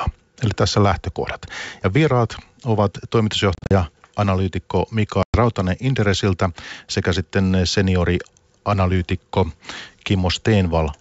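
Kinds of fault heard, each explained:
Packet loss on an ADPCM call: lost packets became hard silent gaps, desynchronising the decoder's predictor and step size, so sound returns briefly mis-levelled or distorted after the 3.55 and 5.23 s holes.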